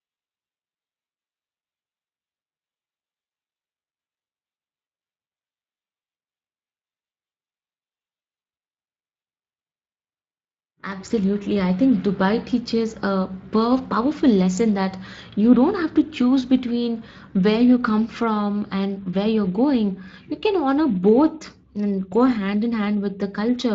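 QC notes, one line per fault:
Throughout, Speex codec: plainly audible hoarse, noisy speech. It fits a Speex setting near 20 kbps.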